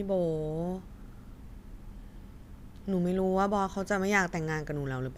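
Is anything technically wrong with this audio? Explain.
No, nothing technically wrong turns up in this speech clip; it all sounds as it should.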